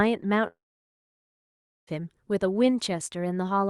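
From 0.47 to 1.89 s a fading buzz gives way to about 1.3 s of silence, likely a long network dropout, and speech resumes with that stretch missing.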